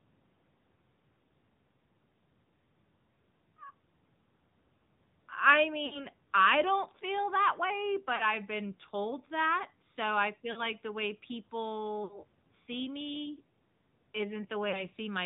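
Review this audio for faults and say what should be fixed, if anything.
The whole clip runs through the AMR narrowband mobile codec: nothing above 4 kHz, with a plainly buzzy, synthetic edge that fits the 10.2 kbps mode.

Lost AMR speech frames cause smeared, fading dropouts of 40 to 60 ms at 5.86 s (before "I don't feel that"), 8.16 s, 10.52 s (between "told that so I" and "the way"), 12.04 s (before "see me") and 14.70 s. The decoder stretches the last good frame and fades it out.

To prevent both, record or route the call over a wideband codec on a cleaner link, or capture the audio locally instead of through the mobile network.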